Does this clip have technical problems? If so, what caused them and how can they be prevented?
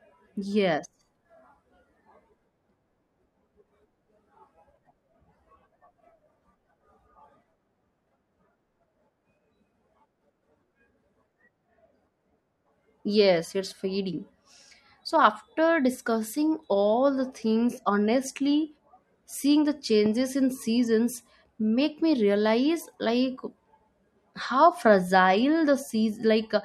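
Yes. Just after "seeing the", at 20.06 to 20.08 s, a single loud pop cracks out a few decibels above the speech, which carries on underneath. It was likely a sudden voltage pulse entering the chain, such as a connector being disturbed, a switch, static discharge or a driver glitch. Secure the cables, avoid switching or touching gear while recording, and keep the setup grounded.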